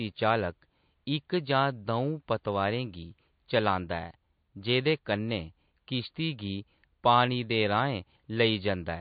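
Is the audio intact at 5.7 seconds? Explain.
No. At 5.7 s, as throughout the speech, the sound is plainly watery and swirly, with dull treble and metallic s sounds. The likely cause is MP3 compression at a bitrate that fits about 32 kbps: weak frequency lines flicker on and off between frames and the top end is cut. The room noise sits about 53 dB below the speech.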